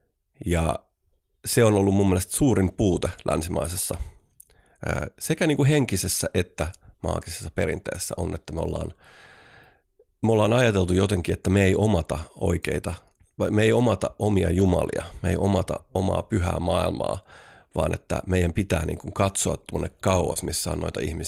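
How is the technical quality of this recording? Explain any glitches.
The recording has three short packet-loss glitches, two repaired one way and one another.

At 14.59 to 14.61 s, right after "me ei omata omia", and at 15.77 s, between "me ei omata" and "omaa pyhää maailmaa vaan", there is a lost packet rebuilt from error correction. Each time a single 20 ms packet went missing, and the decoder played the low-bitrate copy carried in the following packet. There is no gap, only a brief patch of rougher, noisier speech. That grainy texture with no break in continuity sets it apart from concealment.

At 20.33 to 20.37 s, after "niin kuin katsoa tuonne", there is a short concealed packet loss. About 20 ms of audio never arrived in time, and the receiver filled roughly 19 ms by extending the preceding sound before blending back into the real signal. It comes across as a quick smear or wobble rather than added grit. 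That tells it apart from the two rebuilt packets, because here nothing of the original content survived to be decoded.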